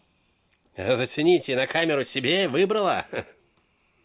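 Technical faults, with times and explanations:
No technical faults detected.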